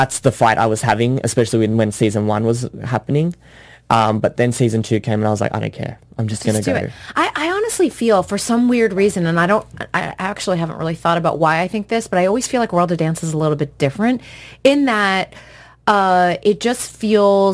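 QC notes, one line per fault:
throughout: aliasing. The speech was taken down to a rate with a 11 kHz folding point, and nothing above that was filtered off first, so high sibilant energy folded back into the band as wrong, unrelated frequencies. The aliased components sit roughly 25 dB below the speech, enough to make s and sh sounds gritty and metallic. On a spectrogram, energy runs hard right up to 11 kHz with mirrored streaks descending from the edge.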